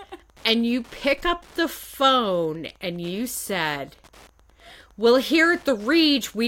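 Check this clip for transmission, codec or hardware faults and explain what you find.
One fault runs through the whole recording: Wi-Fi interference. A faint, steady ticking sits well below the speech, about ten ticks a second, spaced 102.4 ms apart. A nearby Wi-Fi radio's beacon bursts are being picked up and rectified by the audio circuitry.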